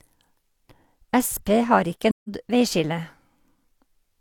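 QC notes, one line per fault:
2.10–2.29 s, AAC frame loss with muting: the speech fades to silence and back as the decoder zeroes the missing spectrum, which fits four lost frames. Overlapping windows taper both edges. The spectrogram shows an empty full-band column; the waveform shows the envelope sloping down to near silence.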